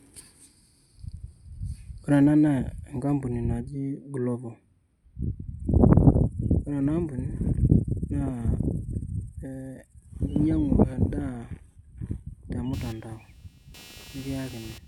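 A load change somewhere in the computer, from the processor, graphics card or mouse, disturbs the ground shared with the audio circuit from 12.73 s to the end of the clip at 14.87 s. That ground disturbance leaks into the signal as computer activity noise: a buzzing chirp pulsing at around 200 times a second, sitting roughly 25 dB below the speech. It follows the machine's workload rather than anything in the speech.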